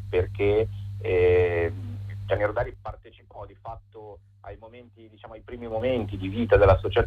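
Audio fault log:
2.32–2.97 s and 5.39–6.04 s, zipper noise: a ticking zip rides a fall, then a rise, of about 20 dB, made in unsmoothed 3 dB steps around ten per second.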